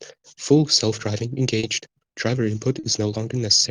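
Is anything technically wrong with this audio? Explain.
Yes, there's short concealed packet loss in two spots, at about 1.59 to 1.66 s and 2.79 to 2.86 s. Each time roughly 40 ms of audio didn't reach the decoder in time, so the receiver patched the gap by extending what came before and then crossfading back into the real signal. You hear it as a quick smear or wobble, and any very short sound landing in that window can just drop out.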